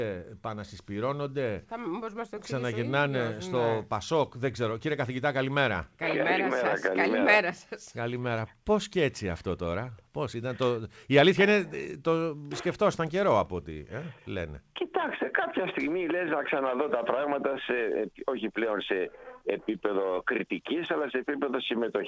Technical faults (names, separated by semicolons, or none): none